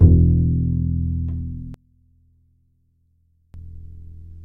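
From 1.74 s to 3.54 s the everyday sounds collapse to a faint remnant, dropping by about 26 dB before returning at full level. The likely cause is one channel inverted: one side of the stereo pair has its polarity flipped, so when the two are summed to mono, everything they share cancels. What survives is only the small difference between the channels.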